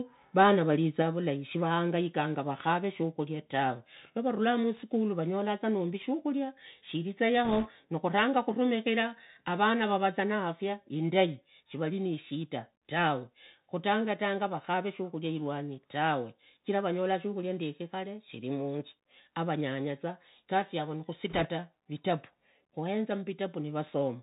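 A speech recording carried through the Bluetooth CVSD headset codec, with plainly audible codec damage from start to finish. CVSD sends a single up-or-down bit per sample and adapts its step size, so the band stops hard near 4 kHz, which fits a 64 kbps CVSD link. Loud, fast-rising sounds outpace the step and smear, sibilants come out scratchy, and a fine granular hiss sits beneath the speech. On a spectrogram this shows as an empty region above 4 kHz and a speckled noise floor under the harmonics. At 1.02 s the whole level, speech and background alike, drops by 3 dB in one step, which is likely the microphone volume stepped down by the call software's automatic gain control. On the waveform the envelope steps down at that point and stays lower. Between 4.77 and 4.81 s, just after "rakhava shukhuria tawe navarulaa", the loudest peaks exceed the converter's range by about 4 dB, and again from 23.87 to 23.90 s by about 3 dB. 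This is likely microphone overload, with input gain set too high. The peak tops are sheared off, giving a harsh crackle on those syllables, and the waveform shows flat-topped peaks, with a smear of added harmonics on the spectrogram. From 7.45 to 7.69 s, between "vanyolaza nombi shukhulia shiriza" and "nukhuranga khuramikhira avana", and again from 21.30 to 21.49 s after "munzu avanyanyaza igasi yavo", bit errors on the Bluetooth voice link, at a rate of a few percent, add a rushing, crackly noise rather than sharp clicks. Every CVSD bit carries the same small weight and the errors decay away, so the spectrogram shows short patches of raised broadband noise within the 4 kHz band and no vertical click lines.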